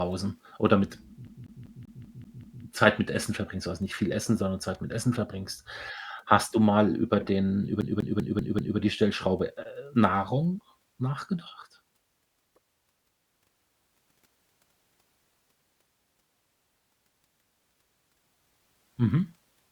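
A speech recording with a CD stuck on one turn: after "oder mit" (1.27 to 2.63 s, seven repeats) and after "mal über den über" (7.81 to 8.78 s, five repeats), a 194 ms slice loops with brief mutes. Unlike a codec dropout, the repetition is exact and evenly timed.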